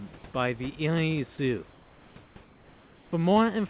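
A speech clip carried over a call path with nothing above 4 kHz, where comfort noise replaces the background at 1.70–2.16, 2.24–2.36 and 2.44–3.12 s. It is likely discontinuous transmission filling pauses with flat synthetic hiss about 3 to 4 dB quieter, not gated silence.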